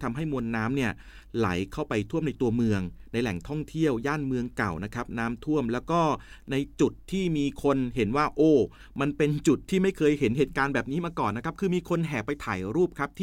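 Nothing goes wrong at any point in this bit of speech, so there are no technical faults to walk through.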